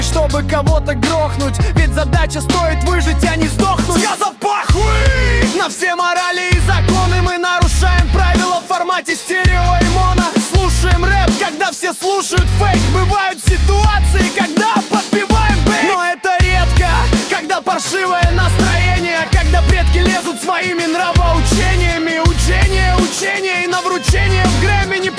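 Nothing in the audio stands out as a technical problem, so there's nothing here to flag or explain.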